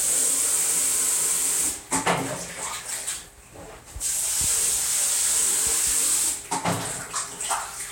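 No technical faults are audible.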